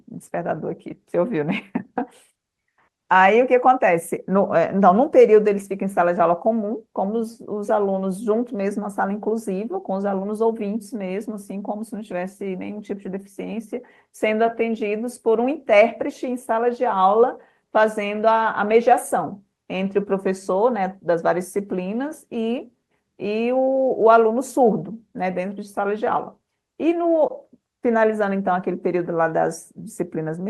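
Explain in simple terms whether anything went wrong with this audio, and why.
Listening closely to the speech gave nothing that stood out as having gone wrong.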